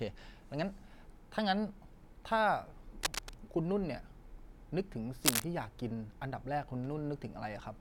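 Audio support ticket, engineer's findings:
Likely worn cable, connector or control shifting, so contact resistance jumps around and injects dense, irregular noise bursts into the signal path. Cable scratch noise over the speech: scratchy rustling at 3.03–3.34 s, roughly level with the speech; second burst 5.24–5.44 s, a few dB above the speech and more intrusive. Short, uneven, broadband crackle, consistent with intermittent contact under movement. Check and reseat or replace the cable and connectors in the chain.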